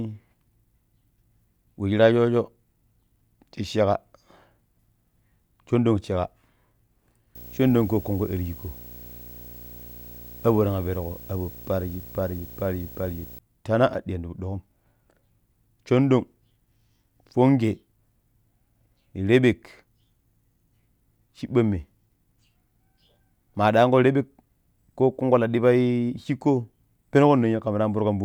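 From 7.35 s to 13.39 s there's video or display buzz riding under the speech. A screen or video cable is leaking into the audio path, so you get a rough buzz at the 59.94 Hz field rate with a haze of hash above it, plus a thin whine up at 15.7 kHz from the line scan. It sits around 20 dB below the speech, then clears.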